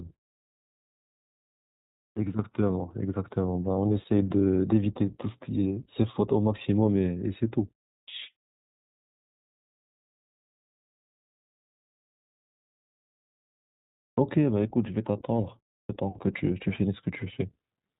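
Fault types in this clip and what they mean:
iLBC codec: narrowband coding throughout, with nothing above 4 kHz; each 20 ms frame is coded on its own, which leaves the speech plainly rough and synthetic.
Clipped start after a pause: at 2.11, 8.02, 14.11 and 15.83 s, the output device wakes late after silence, so about 56 to 67 ms of each onset is cut off abruptly.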